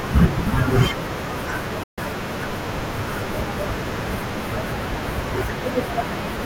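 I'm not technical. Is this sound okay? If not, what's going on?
No. There's a Bluetooth dropout from 1.83 to 1.99 s: the speech cuts to silence for about a sixth of a second, then picks up again as though it had kept playing underneath. The likely cause is the wireless link to the headphones briefly failing. Sound travels over Bluetooth in small bundles, and when a few don't arrive in time the headphones have nothing to play, so that stretch of speech is simply lost.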